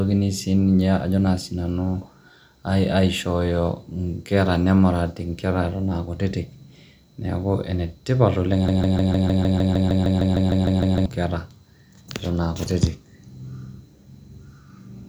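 A broken-record loop runs from 8.68 to 11.06 s, right after "ene tipat oleng'": a 0.15 s fragment repeats exactly, back to back, 16 times, likely because the stream stalled and kept replaying its last buffered piece, so the speech in that span is lost.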